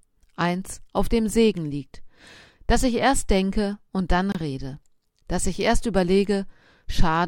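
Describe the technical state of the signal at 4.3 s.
A gap between stream segments opens from 4.32 to 4.35 s: mismatched timestamps leave a hard-edged hole of silence, seen as a flat blank column in the spectrogram and waveform.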